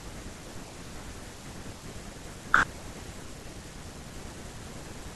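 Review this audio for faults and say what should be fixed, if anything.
No faults found in this speech recording, so there is nothing to fix.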